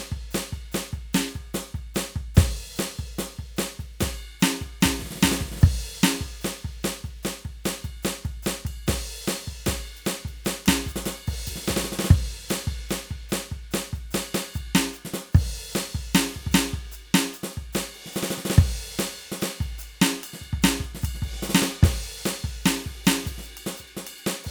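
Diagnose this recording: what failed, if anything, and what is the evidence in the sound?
Nothing failed in this recording.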